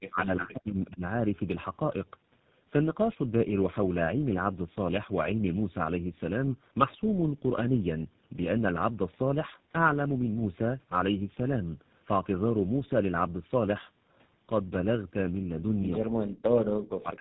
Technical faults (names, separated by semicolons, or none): tandem speech coding; speech suppressed in double talk